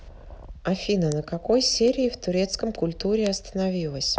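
At 1.12 s there's a sharp tick in the speech, peaking around -13 dBFS, and a quieter one at 1.88 s, around -19 dBFS. A third at 3.27 s matches the first at around -13 dBFS. These are bit error spikes: a flipped bit throws a sample's value off by a power of two before it snaps back. The louder two each span a short run of three corrupted samples, the quieter one a single bad sample.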